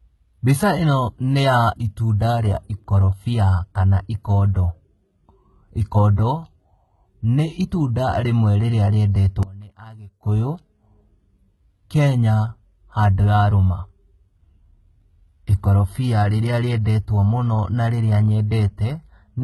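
Throughout the speech, the treble sounds synthetic and heavily damaged. Nothing remains above 11.8 kHz. This is likely HE-AAC compression, which fits a rate around 16 kbps. The codec rebuilds the top band from copied lower bands, so harmonics no longer line up there.

At 4.54 s, just after "rĩa ikorobia kana", comes a pre-echo. A short hiss leads the attack by about 14 ms. The codec spread its block noise, sized for the loud onset, into the quiet moment just before it.

From 9.43 to 10.23 s, the sound drops by about 21 dB for 0.8 s. The likely cause is one channel inverted. The two channels cancel when summed to mono, leaving only the small difference between them. Background sound falls away as well.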